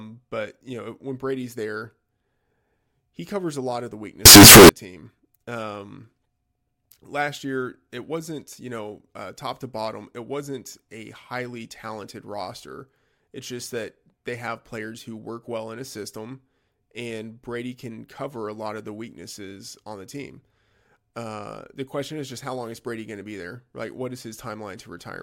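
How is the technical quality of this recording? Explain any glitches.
One serious glitch stands out. From 4.26 to 4.69 s, just after "a lot of the", the speech turns into a blast of harsh, very loud distortion. The likely cause is signed and unsigned mixed up: reading 16-bit samples with the top bit flipped makes every zero crossing leap across the whole range. Unlike ordinary clipping, quiet moments become as loud as the peaks.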